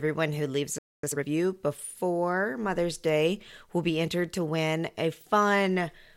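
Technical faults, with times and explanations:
0.78–1.04 s, playback stall: The player most likely ran short of buffered data or had its output thread blocked, so it sent nothing for about 247 ms. The speech cuts off mid-flow into dead silence, then resumes from where it stopped.
1.04–1.28 s, time-compressed catch-up: To clear the backlog left by the stall, the player drops small slices of audio and cross-fades across the gaps, running at 2.0 times speed. The speech sounds hurried but keeps its normal pitch.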